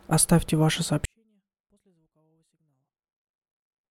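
At 1.05 s the level collapses by about 48 dB and stays there to the end: a 24-bit alignment error (too quiet), where 24-bit samples sitting in the low bytes of 32-bit words are read as full 32-bit integers.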